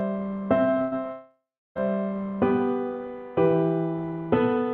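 From 0.81 to 0.93 s the sound briefly turns into a held, fading continuation of itself and then jumps ahead. This is a burst of packet loss: about 100 ms of audio never arrived, and the receiver stretched the last sound to cover the gap.

At 1.12 s the sound again smears into a fading buzz or hiss that dies into about a third of a second of silence, and the audio resumes at 1.77 s with roughly 0.64 s of material gone. This is likely a long network dropout, with concealment filling the gap until it gave up.

Both gaps sit on a call path whose Opus coding limits the top end to about 8 kHz.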